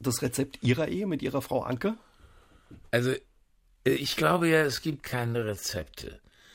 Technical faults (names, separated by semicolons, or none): time-stretched section